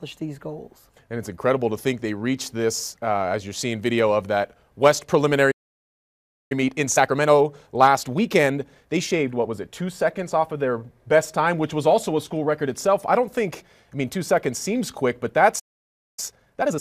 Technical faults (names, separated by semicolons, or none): playback stall; time-compressed catch-up